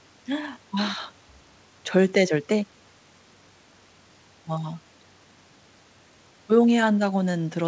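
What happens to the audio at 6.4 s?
Nothing goes wrong at 6.4 s: the speech there passes intact through the call path, which carries it as wideband audio with nothing above 8 kHz.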